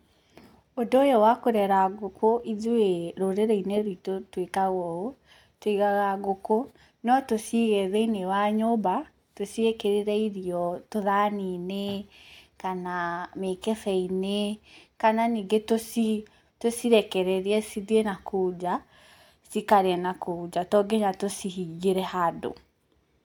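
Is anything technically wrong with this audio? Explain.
No, no technical faults here.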